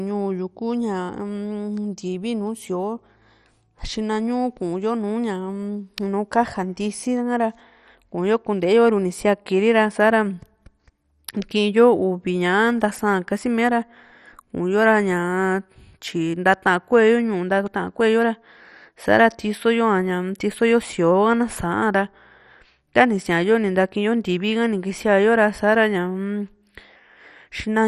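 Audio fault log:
Throughout, MP2 compression: the speech sounds dull and muffled, with a gurgling, grainy roughness and upper detail that flickers in and out; nothing is heard above 13.8 kHz. This is likely heavy MPEG Layer II coding, and the damage fits a rate near 56 kbps. With so few bits to share among its 32 sub-bands, the codec shuts off the top bands and quantises the remaining ones coarsely, so their content churns audibly.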